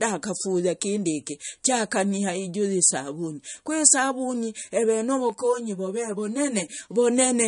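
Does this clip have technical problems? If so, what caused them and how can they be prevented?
Yes. Throughout the speech the sound is watery and swirly, sibilants chirp metallically, and nothing is present above 10.6 kHz. This is likely MP3 compression at a low bitrate: the damage is plainly audible and points to roughly 40 kbps. Starved of bits, the encoder cut the treble at a fixed point and let weak frequency lines flicker on and off between frames. Encoding at a higher bitrate, or keeping a lossless master, prevents this.

From 5.30 to 6.78 s the sound turns hollow and phasey, with a thin, filtered colouring. This is channel delay (comb filtering): one channel arrives about 10 ms behind the other, and when the two are summed to mono, the content common to both cancels at evenly spaced frequencies. The first notch sits near 50 Hz, with further notches repeating upward across the spectrum. 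Aligning the channels before any mono fold-down prevents this.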